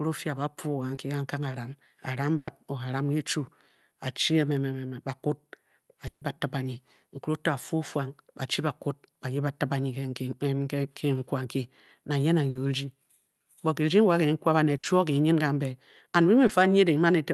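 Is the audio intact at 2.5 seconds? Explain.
No. A burst of packet loss from 2.37 to 2.49 s left about 100 ms concealed by extending and fading the last sound, with the audio resuming further on.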